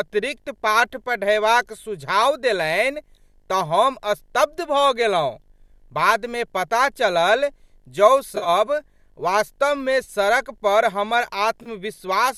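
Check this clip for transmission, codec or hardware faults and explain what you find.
Two faults are audible in this speech clip: a steady video buzz and three short dropouts from lost codec frames.

Video or display buzz, throughout: a screen or video cable is coupling into the audio path. It adds a 50 Hz field-rate buzz with hash above it, plus a faint 15.6 kHz line tone, sitting about 45 dB below the speech.

AAC frame loss with concealment, at 8.36–8.49 s, 10.04–10.09 s (just before "सड़कपर हमर") and 11.63–11.68 s (right after "वास्तवमे सड़कपर हमर"): frames went missing and the decoder patched the gaps from the last good spectrum. The first stretch loses about 70 ms scattered over 100 ms, with the longest run around 40 ms. The later two lose about 30 ms each, which fits 10 ms frames from the likely low-delay AAC coding. Each gap sounds like a brief smeared, noisy, phasey patch.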